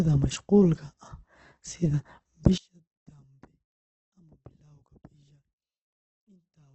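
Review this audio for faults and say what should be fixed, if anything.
Opus compression runs throughout. The speech sounds grainy and rough, with nothing above 8.2 kHz. This is likely a very low bitrate, near 12 kbps. Fix it by encoding at a higher bitrate.

One channel is inverted from 2.58 s to the end. Summed to mono, the speech drops by about 32 dB. This is likely a polarity flip on one side. Fix it by checking channel polarity before summing or exporting.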